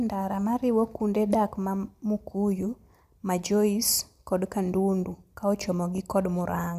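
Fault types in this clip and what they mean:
Nothing stood out on listening to this speech recording.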